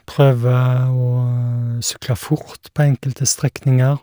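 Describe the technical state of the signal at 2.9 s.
At 2.9 s the speech carries crude rate conversion, present throughout the clip. Every third output sample appears duplicated by nearest-neighbour copying, which fits a 32 to 48 kHz jump without filtering. The result is a gritty, inharmonic fizz roughly 25 dB down, seen as stair-stepped waveform samples and mirrored spectrogram images near 16 kHz.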